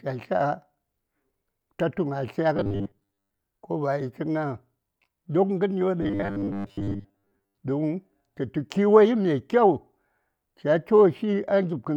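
A speech clip with two stretches of robotic sound from repeated short buffers, at 2.57 to 3.39 s and again at 6.02 to 7.60 s. In both, the speech turns into a stiff, metallic buzz at a fixed 100 Hz that only loosely tracks the words, with most of the real audio missing. The likely cause is audio arriving too slowly, so playback keeps looping the last 10 ms chunk to fill the gaps.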